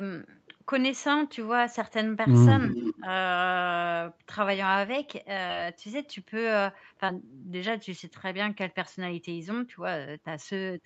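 Speech recorded over a call path whose band stops at 8 kHz, with three kinds of fault. From 2.64 to 3.00 s there is an echo leak: a delayed copy of the speech arrives about 0.37 s behind the original, at roughly 15 dB below it. This is likely a far-end loudspeaker being picked up by its microphone, with the echo canceller leaving a residue that was sent back into the call. Right after, from 2.98 to 3.06 s, the speech is suppressed in double talk: the level dips by around 15 dB over roughly 70 ms in total, so the speech briefly thins and pulls back. The likely cause is the echo canceller, faced with overlapping near-end speech and echo, attenuating both rather than separating them. Two short concealed packet losses follow, at 5.47 to 5.51 s and 7.07 to 7.10 s. In each, about 20 ms of audio failed to reach the decoder in time, and the receiver papered over the gap by extending the preceding sound, synthesising 17 ms in the first case and 10 ms in the second before crossfading back into real audio. 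Both are audible as a quick smear or wobble, and any short consonant in those windows may be lost.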